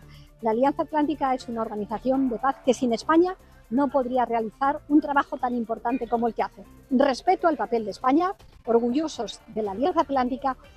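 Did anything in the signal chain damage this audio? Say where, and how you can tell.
Yes, at the network stage: repeated packet loss (robotic sound) from 7.97 to 9.92 s. Around twenty brief holes, none longer than about 23 ms, are patched by extending the preceding sound, giving choppy texture with pieces missing. A spectrogram shows repeated smeared, stretched-looking slices; the waveform shows copied cycles.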